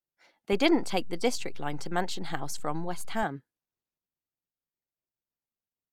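A speech recording with a DC step. At 0.53 s the waveform's zero line jumps to an offset, heard as a low thump. The offset lasts until 3.23 s. The speech itself carries on unchanged, as when an input with an offset is switched in and out.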